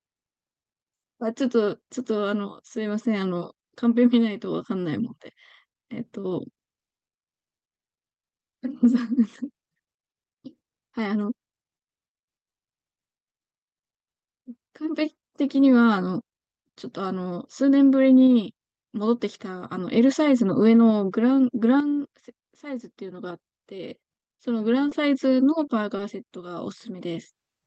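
A speech recording over an Opus call path, band-limited near 8 kHz, shows short concealed packet loss at 24.89, 25.65 and 25.97 s. About 20 ms of audio never arrived each time, and the receiver bridged the gap with synthesized continuation, heard as brief smears or wobbles. On a spectrogram these appear as short, smoothed vertical slices, and the waveform shows a momentary unnatural repetition.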